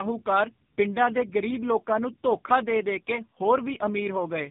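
From start to finish the speech sounds rough, muffled and warbly, with nothing above 3.8 kHz. This is tandem speech coding: two speech codecs in a row, which fits GSM full rate feeding AMR-NB at 7.4 kbit/s, the second re-coding the first's already degraded output.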